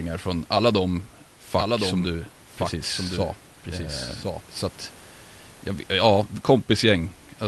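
From 1.56 s to 4.42 s there's a doubled audio track: a full-band copy of the speech trails roughly a second behind, a few dB quieter, with no room tail, and it cuts in and out abruptly. It's likely a slower path capturing the audio twice.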